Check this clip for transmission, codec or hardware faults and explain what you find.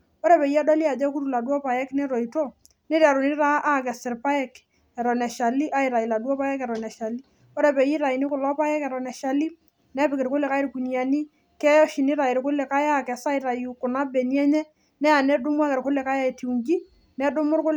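One fault is audible, a single click in the speech. Dropped samples at 2.46 s: a couple of samples, a tiny fraction of a millisecond, are likely missing, so the waveform jumps straight to a later value. Nothing audible is lost, but the abrupt step produces one sharp click, seen as a thin vertical line across the spectrum.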